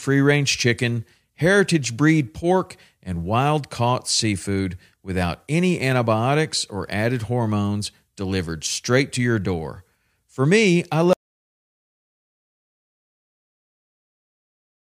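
At 11.13 s the input feed was most likely lost, through a disconnected device, a failed link or an accidental mute, while the recorder kept writing silence. The result is an audio dropout to silence: the speech breaks off abruptly right after "me I" and never returns. The remaining stretch, about 3.7 s to the end of the clip, is dead silence with no room tone, and whatever followed is missing.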